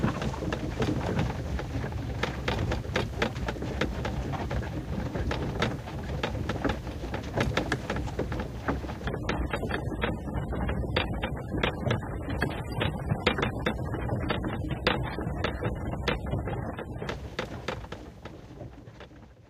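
From 9.07 to 17.07 s, an adaptive stream at a lower bitrate takes over: the connection slowed, so playback switched to a leaner version of the stream. The everyday sound abruptly loses everything above 13.5 kHz and turns grainy, which fits a step down from roughly 96 to 27 kbit/s, with no gap at either switch.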